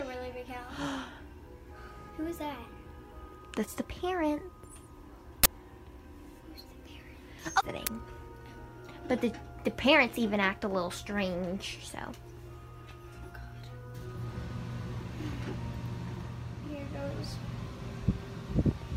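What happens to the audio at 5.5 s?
A short, loud burst of digital noise cuts in from 5.44 to 5.46 s. It's an uninitialised buffer: leftover memory played as samples, consistent with a 1024-sample block.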